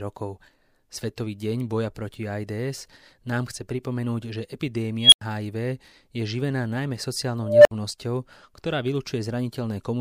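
Speech, with an unstable filter at 4.99 s and 7.41 s. A runaway tone around 3 kHz, then around 700 Hz, swells over 132 ms and 238 ms, clips, and drops to silence for 93 ms and 61 ms. On a spectrogram each is a bright horizontal line. On the waveform it balloons until it clips, then flatlines.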